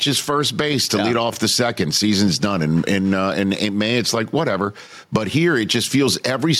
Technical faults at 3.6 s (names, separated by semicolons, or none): gain pumping